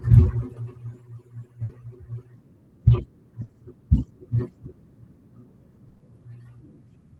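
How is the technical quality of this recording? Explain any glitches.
The speech has three short dropouts where the sound briefly freezes into a held, fading tone before jumping ahead. They come at 1.63 to 1.72 s, 3.43 to 3.52 s, and 5.88 to 6.03 s. Each is a burst of packet loss: consecutive packets arrived too late or not at all. The receiver stretched the last sound and faded it, covering 60, 60 and 120 ms. Then playback resumed with that much speech gone. The sound is band-limited around 12 kHz, which fits a call codec like Opus.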